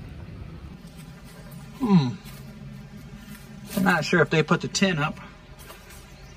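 From 0.74 s to the end, the audio shows channel delay (comb filtering). One channel lags the other by roughly 5 ms, and when the two are summed to mono the shared content cancels at regularly spaced frequencies. The first notch falls around 100 Hz, with further notches repeating up through the spectrum. The result is a hollow, phasey tone whose coloration stays fixed rather than sweeping, because the delay never changes.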